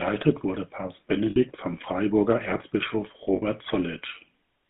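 Buzzy, gravelly speech confined to a narrow 150 Hz to 3.5 kHz band carries the plainly audible roughness of the GSM full-rate codec, which fits a 13 kbps pulse-excited vocal-tract coder. At 1.30–1.37 s and 3.36–3.43 s the sound briefly freezes into a rough metallic ring for 60 ms. These are lost GSM frames, concealed by repeating the last good frame's settings.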